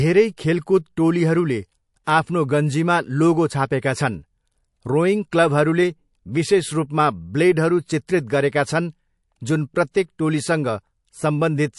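Throughout the speech there is plainly audible codec damage, likely from MP3 compression. Weak detail flickers in and out, giving a watery, swirly sound. The damage fits a low bitrate near 48 kbps.

Pre-echo appears at 2.04 s and again at 9.91 s. A short hiss rises about 24 dB, then about 23 dB, and lasts about 33 ms before each sharp attack. The smeared noise fits a long 48 ms block with no switch to short blocks.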